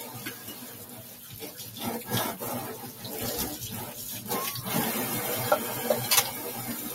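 Across the whole clip the level breathes unevenly. Sharp onsets arrive intact, but anything sustained or decaying keeps getting pulled down and let back up, swinging by something like 10 dB, so the sound pumps and thins. This is a noise suppressor applied to music or sounds. A processor tuned for speech is still active, and it treats steady tones, ambience and reverberant tails as background noise to be attenuated.

From 0.34 to 1.77 s a sustained portion of the audio sinks below its surroundings and its decay seems clipped short, while any sudden components hold their level better. This is sound cut by the noise suppressor, with the drop reaching about 6 dB at its deepest. Over roughly one and a half seconds the processor classed this steady material as noise and turned it down harder than the rest of the clip.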